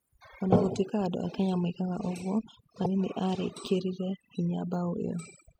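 Overdone noise removal runs through the whole speech clip. A noise reduction stage was set far too aggressively, so it pulls individual frequency bands down or shuts them off whenever their level sits near its noise estimate, taking the softer parts of the voice along with the hiss. The result is a background that drops away, dotted with twinkling, chirpy specks, while the voice loses its quieter detail.

From 2.82 to 2.86 s, right after "moigaga ũguo", there is damaged data in a compressed stream. Part of the encoded stream there was corrupted, so the decoder misread those frames, lost sync and had to hunt for the next valid frame header before playback could carry on. For about 40 ms this comes out as a short glitch in the audio.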